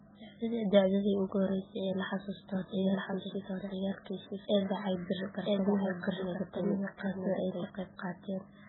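From the start and throughout, the speech carries heavy MP3 compression damage, likely from encoding at a very low bitrate; the thinness fits something around 8 kbps. Nothing remains above 4 kHz, so the encoder has cut the treble at a fixed point, and weak frequency lines drop in and out from frame to frame. The result is a watery, swirling texture, with s sounds turned metallic and chirpy and consonant attacks smeared.

From 2.55 s, just after "la xasuusto", to 7.63 s, a doubled audio track appears. A second full-band copy of the speech runs about a second behind the original at roughly the same level, so two out-of-step streams of the same speech overlap. The copy has no decay or room colour, and it begins and ends abruptly. This points to the signal likely being captured twice, once through a slower path.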